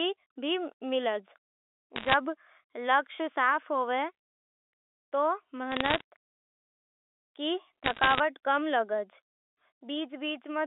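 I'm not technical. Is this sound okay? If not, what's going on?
No. The clip has three short bursts of bit errors on a digital phone line, at 1.96–2.14 s, 5.72–6.01 s and 7.84–8.20 s, the last ending just before "कम लागे". Each flipped bit corrupts one sample, putting sharp ticks and crackle over the speech.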